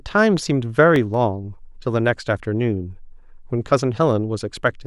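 A scratch on the disc destroyed more data than error correction could rebuild once per revolution, so the player patched the gaps. Between 0.78 and 1.14 s this causes CD scratch ticks: three evenly spaced clicks in the speech, the longest lasting about a millisecond.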